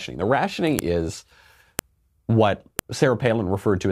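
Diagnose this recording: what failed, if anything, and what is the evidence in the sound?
Storage or stream joining: file header played as audio, sharp clicks at 0.79, 1.79 and 2.79 s, a second apart, where unstripped WAV headers between one-second pieces play as samples.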